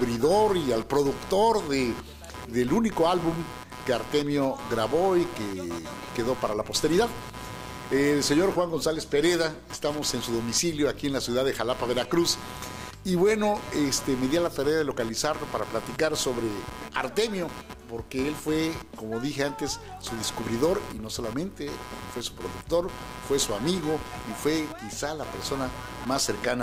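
Running under the whole clip there's computer activity noise: a buzzy, chirping layer that pulses at somewhere around 150 times a second and sits only about 15 dB below the sound itself, so it's hard to miss. What's going on is the computer's shifting load, from processor or graphics work or mouse movement, pushing current through the ground the audio circuit shares, so the interference tracks the machine's activity rather than anything in the sound.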